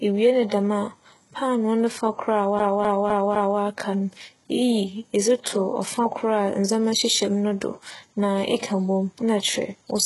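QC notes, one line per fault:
Throughout, HE-AAC compression, likely: the speech carries heavy codec damage, and the spectrum stops at about 11.5 kHz with nothing above. The treble is rebuilt by copying lower bands upward under a coarse envelope rather than coded directly, so harmonics fail to line up across the crossover and s sounds come out gritty, metallic or lispy. The extent of the damage points to a very low bitrate, around 12 kbps.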